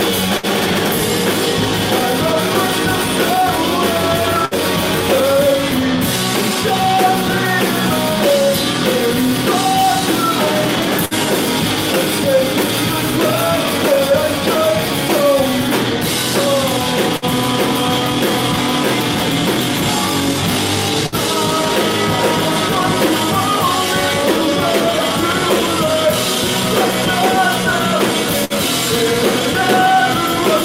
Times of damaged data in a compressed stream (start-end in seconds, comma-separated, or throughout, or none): none